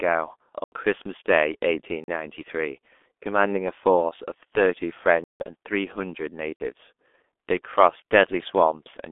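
Throughout, the G.723.1 codec at about 6.3 kbit/s leaves nothing above 3.7 kHz and smears consonants into a hoarse blur, unlike a plain low-pass filter, which would only dull the sound. Blocks of digital silence cut in at 0.64 s (80 ms), 2.04 s (40 ms), 5.24 s (160 ms) and 6.56 s (40 ms). These are hard cuts to silence with no fade, not concealed packet loss, which would fill the gap with sound.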